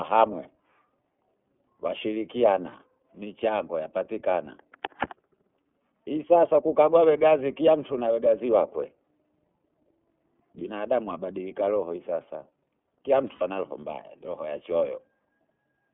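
Throughout, the speech sounds thin, slightly rough and synthetic, confined to roughly 250 Hz to 3.4 kHz. This is iLBC codec coding, consistent with its 13.33 kbps mode using 30 ms frames.

At 2.69 s and again at 13.35 s, the speech briefly becomes a held, buzzy vowel, for 30 ms and then 60 ms. These are lost iLBC frames, which fits one lost frame and then two. The decoder fills each gap by repeating the last pitch cycle mixed with noise, and clear speech resumes almost at once.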